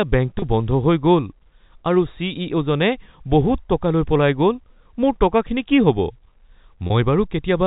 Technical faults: packet loss with pitch repetition

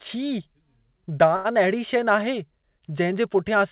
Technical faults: short stall from a late packet

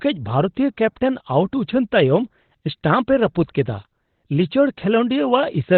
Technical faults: Opus compression

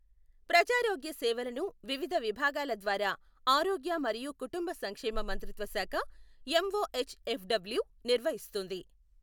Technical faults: none

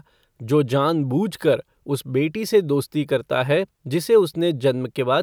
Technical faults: none

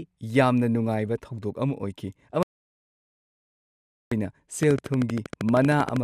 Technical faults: audio dropout to silence; train of clicks

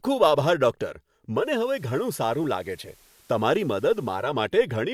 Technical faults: digital radio blending to analogue

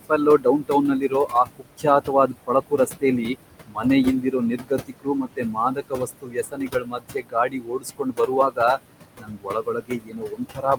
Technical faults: noise suppressor artifacts; speech cut by the noise suppressor

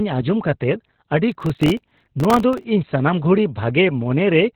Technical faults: Opus voice compression; processor overload crackle

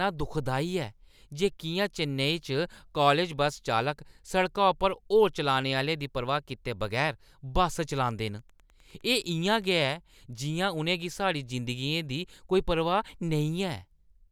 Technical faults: Wi-Fi interference

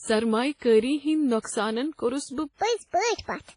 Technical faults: WMA compression; section at the wrong speed; pre-echo

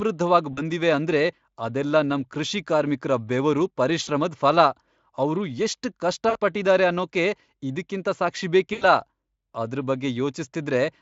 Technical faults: VoIP packet loss concealed by the speech codec

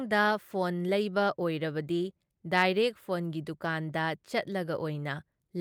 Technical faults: none

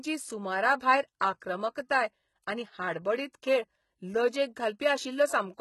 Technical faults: HE-AAC compression; pre-echo

